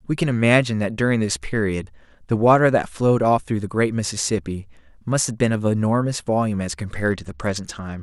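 From 6.94 s to the end of the speech at 8.02 s, a Bluetooth SBC bit pool drop starves the encoder. The top sub-bands lose their bits, so treble dulls and gritty quantisation noise rises, which fits the bit pool falling from 28 to 11, near 90 kbps.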